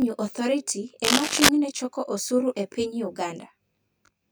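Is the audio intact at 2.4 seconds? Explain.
No. At 2.4 seconds, as throughout the clip, there is channel delay (comb filtering). One channel lags the other by around 20 ms, and summing them cancels shared content at evenly spaced frequencies from near 30 Hz upward, making the speech sound rough or slightly doubled.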